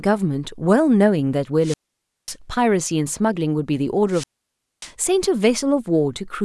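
At 1.62 to 2.35 s and again at 4.09 to 4.92 s the speech suffers a wireless microphone squelch dropout: the fading radio signal brings up hiss before the receiver mutes for about 0.54 s, then 0.59 s. That rising static before the silence distinguishes it from a clean digital dropout.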